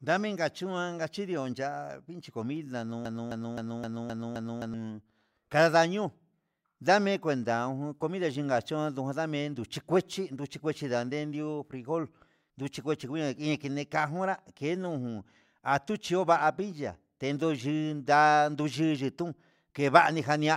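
Speech, with a broken-record loop from 3.05 to 4.74 s: right after "ngachindun ya'a vinchi comida", a 0.26 s fragment repeats six times back to back. The likely cause is a stalled player or stream resending the last piece it held, so the audio meant for that span is lost.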